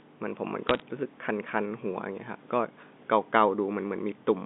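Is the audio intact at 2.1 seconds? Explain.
Yes, the audio is intact at 2.1 seconds, with no fault at that moment and only the narrow telephone band of G.711 coding to be heard there.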